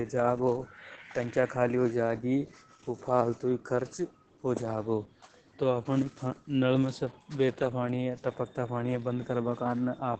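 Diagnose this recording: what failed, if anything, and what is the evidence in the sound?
The codec stage is the culprit: this speech has been through Opus voice compression, throughout the clip. Nothing survives above about 8.7 kHz, and the voice sounds muffled, hoarse and a bit robotic. That fits wideband SILK at around 10 kbps coding the excitation coarsely.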